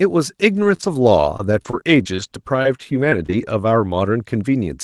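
Repeated packet loss (robotic sound) runs from 0.57 to 2.22 s and again from 2.62 to 3.47 s. Audio keeps arriving late or not at all, and each hole, none longer than 32 ms, is patched by stretching the previous sound, giving choppy speech with pieces missing.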